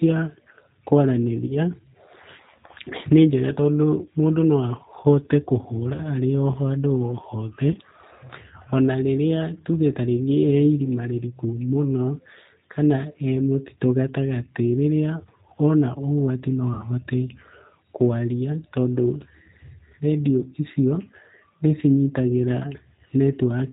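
All the way through, the speech has that G.729 sound: squeezed to 8 kbit/s and rebuilt from a vocal tract filter, a pitch predictor and a few pulses, so it's dull above 4 kHz, a bit rough and plainly synthetic.

Then there's VoIP packet loss concealed by the speech codec at 1.47–1.57, 5.94–6.00 and 7.72–7.77 s, each gap about 20 ms, which fits one lost packet. At 16.74–16.85 s about 60 ms goes, pointing to three packets. The decoder stretches the last sound into a fading buzz or coloured noise, and it stays weak briefly afterwards.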